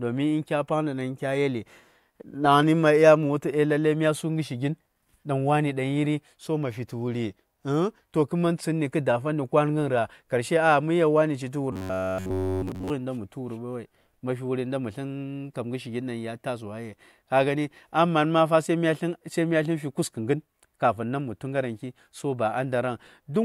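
From 11.73 to 12.90 s the speech goes robotic: it's wholly a buzz near 93.8 Hz, likely from repeated short buffers of about 10.7 ms.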